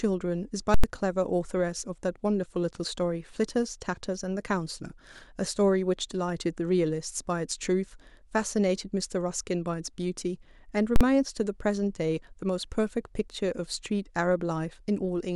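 Violent bursts at 0.74–0.84 s and 10.96–11.01 s are invalid numbers at full scale: broken calculations pinned whole blocks, fitting 4096 and 2048 samples, to one extreme value.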